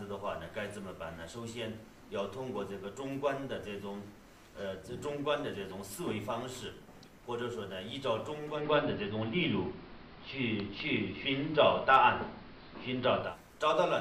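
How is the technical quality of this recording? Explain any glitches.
One glitch stands out: from 8.48 to 13.37 s, digital radio blending to analogue. The receiver lost its digital stream and cross-faded over 158 ms to the AM broadcast. The sound dulls, shifts about 5 dB in level, and gains faint hiss. A spectrogram shows the upper treble thinning and a raised noise floor, and the waveform shows a level step.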